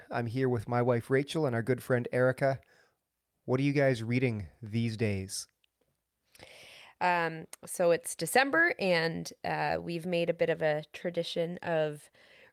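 A recording of speech with no audible technical faults anywhere in the signal.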